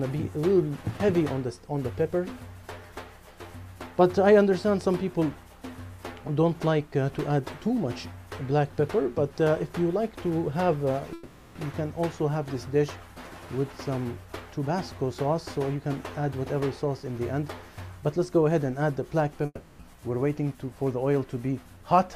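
Two gaps in delivery, most likely a long network dropout each time, cut the audio stream. From 11.13 to 11.57 s the receiver bridges the missing stretch with a fading buzz- or hiss-like continuation of the last sound for about 420 ms. From 19.45 to 19.81 s a similar fill lasts about 340 ms and ends in a brief silence of about 30 ms. In both places the audio resumes further on, with the lost portion gone.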